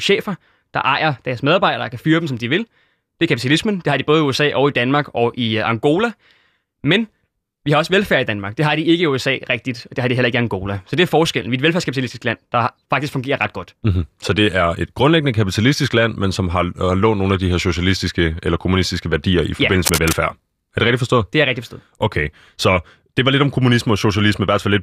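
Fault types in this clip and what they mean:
Cable scratch noise: From about 19.85 to 20.16 s, a short patch of dense, ragged crackle sits over the speech for roughly a third of a second. It's loud, only a few decibels under the voice, so it's hard to miss. The likely cause is a worn lead, plug or pot being nudged, with its contact resistance flickering and spitting irregular noise bursts into the signal while it moves.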